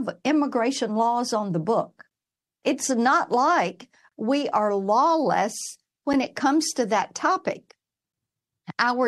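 Timestamps of consecutive 2-second stream segments fail to meet, a gap between stream segments that the player fills with silence: a hard-edged 14 ms hole at 2.10 s after "laws on the book", and 23 ms from 4.09 to 4.12 s between "not like" and "we are lawless".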